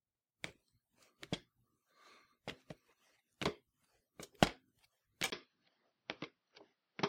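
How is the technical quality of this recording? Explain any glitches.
The recording has one glitch. At 5.30 s, after a 20 ms gap, the sound turns dull and boxy with nothing above 6 kHz, and a faint new noise floor appears while the level stays the same. The likely cause is an input switched to a poorer, narrower-band device.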